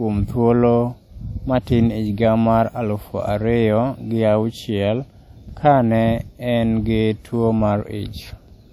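WMA compression runs throughout the speech, likely from a low-bitrate transform encode consistent with roughly 48 kbps. Long transform blocks smear quantisation noise around each syllable, giving plainly audible ringing and a washy hiss that swells with the signal, and nothing remains above 19.6 kHz.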